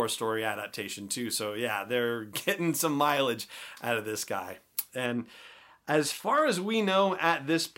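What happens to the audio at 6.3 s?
Nothing goes wrong at 6.3 s; the audio is intact there.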